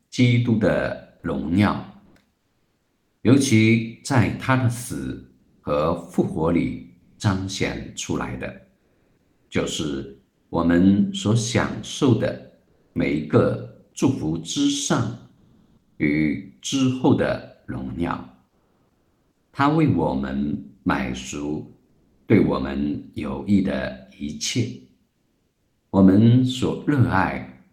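The sender's voice detector likely dropped into discontinuous transmission during pauses, so the receiver filled them with comfort noise in place of the background at 2.05–3.23, 5.39–10.51, 12.67–12.95, 15.37–15.99, 18.49–19.53, 21.89–22.27 and 25.11–25.91 s. Each time the real background gives way to a steady, detail-free hiss. It shifts in level by about 3, 9, 4 and 7 dB in the gaps at 12.67, 15.37, 18.49 and 21.89 s, while at 25.11 s the level holds but the texture still flattens.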